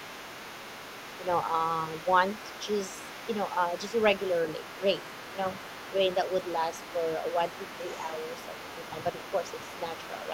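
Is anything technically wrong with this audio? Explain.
Yes. Other side's voice leaking through, from the start to 6.55 s and from 6.71 s to the end: likely an echo canceller missing loudspeaker pickup, so a faint second voice sits about 15 dB under the speech.

Speech suppressed in double talk, at 6.56 to 6.64 s, 7.33 to 7.39 s and 8.02 to 8.16 s: the canceller likely ducks overlapping talk, so the voice briefly dips by about 5 dB.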